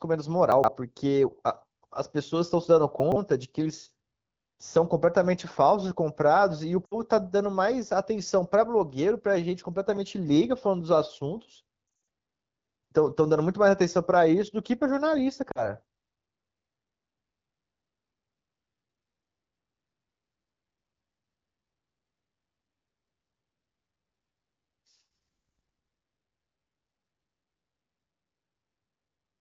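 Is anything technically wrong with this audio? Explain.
Yes. Two kinds of fault are audible.

Chunks out of order occur at 0.52 to 0.68 s and again at 3.0 to 3.16 s. In each span, a 40 ms piece of audio plays after material that should follow it, which fits a chunk arriving three places late. Nothing goes missing. The sequence is simply scrambled. Each event sounds like a brief jumbled stutter. Each has three hard joins.

Lost AMR speech frames occur at 6.85 to 6.95 s, 11.87 to 12.07 s and 15.52 to 15.68 s. Damaged frames failed their checks. The decoder then filled the gaps by reusing the last good pitch and vocal tract settings at falling gain. The first gap lasts 60 ms. The second scatters 140 ms of loss over 200 ms, with runs up to 60 ms. The third is 40 ms. Each drops toward near silence within two frames, and the voice comes back weak or rough for a moment. The wideband coding around these faults is light, which fits about 12.65 kbit/s.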